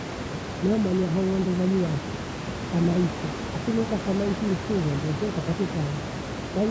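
Nothing here needs fixing: the speech has only the usual call microphone shaping, with nothing above 8 kHz, and room noise sitting about 9 dB under it.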